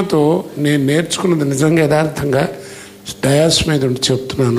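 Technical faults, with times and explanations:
1.71 to 2.31 s, drift correction step. The sound suddenly plays 5.5% fast and rises by 93 cents, just under a semitone. Speed and pitch move together, so this is a change of playback rate, not a pitch effect. After about 0.6 s it snaps back to normal speed. Both the shift and the return are abrupt. The likely cause is clock-matching software stepping the rate up to drain a buffer that had filled too far.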